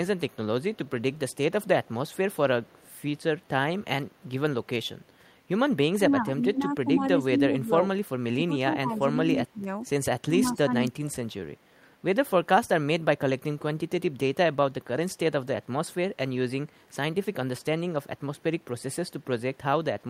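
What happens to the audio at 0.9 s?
At 0.9 s the speech carries an echo leak, running from 0.29 s to 2.87 s. A faint copy of the speech follows the original about 173 ms later, sitting far below the direct sound, so it reads as a trailing shadow. The likely cause is a loudspeaker on one side whose echo canceller failed to fully suppress the microphone pickup, letting the residual return down the line.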